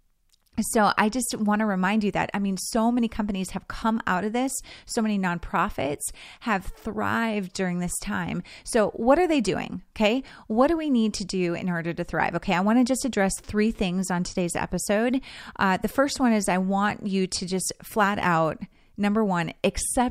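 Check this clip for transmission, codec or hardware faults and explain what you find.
No transmission, codec or hardware faults.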